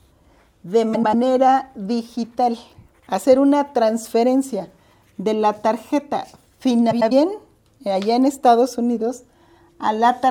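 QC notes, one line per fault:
0.93–1.15 s and 6.91–7.12 s, frames out of order: in each stretch, two neighbouring blocks of about 96 ms were decoded in reversed order, so the later block plays before the earlier one. The sound garbles into a brief flutter. This fits two runs of four frames traded places. Nothing is lost or added, so the timing after each stretch stays intact.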